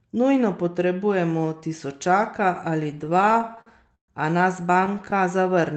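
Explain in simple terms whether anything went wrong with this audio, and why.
Between 2.91 and 4.10 s the speech hits repeated stalls (stutter): the data kept arriving late, so playback kept running dry and stretching the last sound, with waits up to 133 ms. It happens again, more briefly, from 4.62 to 5.14 s.

From 5.36 to 5.74 s there's a jitter buffer slow-down. The receiver repeats tiny slices of sound to rebuild its reserve, so the speech plays at about 91% speed with the same pitch.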